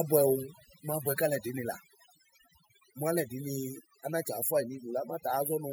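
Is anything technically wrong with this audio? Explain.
Yes. Throughout the speech there is overdone noise removal. A noise reduction stage was set far too aggressively, so any frequency band sitting close to its noise estimate is pushed almost to nothing, and the quieter parts of the voice fall below that line and get cut along with the noise. In the pauses the background drops to near silence sprinkled with twinkling specks.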